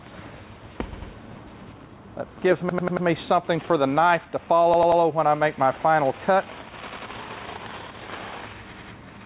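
You get a stutter five times, at 0.93 to 1.12 s, 2.69 to 3.07 s, 4.74 to 5.02 s, 6.87 to 7.06 s and 8.73 to 8.92 s. That's a repeated buffer: fresh audio arrived late, so the device replayed the same chunk of about 93 ms, which fits a 4096-sample buffer. Each chunk plays twice more, except four times in the second event and three times in the third, with a hard join at every repeat. Practically no audio goes missing. Everything sits below 4 kHz, consistent with a narrowband call codec like G.711.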